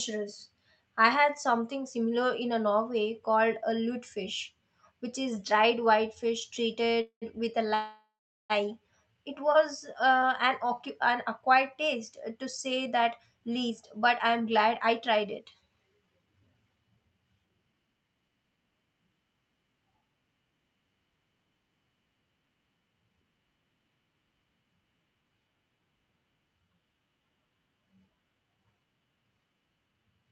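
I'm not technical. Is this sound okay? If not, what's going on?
No, there are two kinds of problem.

The first is a call audio freeze, and it happens twice. At 7.01 s the sound stalls for about 0.2 s. The last bit of sound is stretched into a short fading buzz, then there is about 0.1 s of silence. At 7.75 s a longer stall runs to 8.52 s, about 0.75 s, with roughly 0.4 s of silence in it. The likely cause is that data on the network was held up and the receiving end ran out of sound to play. When it arrived, the speech carried on where it stopped. Nothing is lost, but gaps are inserted.

The second is a jitter buffer speed-up, from 12.86 s to 20.22 s. The receiver had built up extra waiting audio. To catch up, it snipped out many tiny slivers of speech in a row, about 0.7 s in total. The speech plays about 10 percent faster. The pitch stays the same, so it sounds hurried rather than squeaky.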